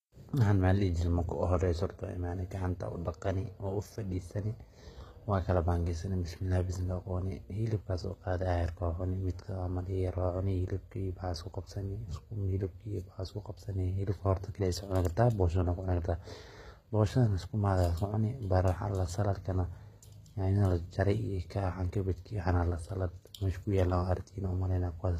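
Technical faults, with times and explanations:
Throughout, HE-AAC compression: the speech treble sounds bright but synthetic, with gritty, lispy s sounds and nothing above 14.9 kHz. This is likely HE-AAC rebuilding the top band from copied lower bands whose harmonics misalign, with plainly audible damage that fits roughly 20 kbps.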